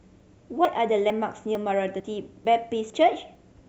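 Audio missing between chunks breaks this speech clip at 0.20, 0.65, 1.10, 1.55, 2.00, 2.45, 2.90 and 3.35 s, each a sudden skip of about 50 ms spliced shut with no silence. The steady spacing points to a likely chunk boundary every 0.5 s.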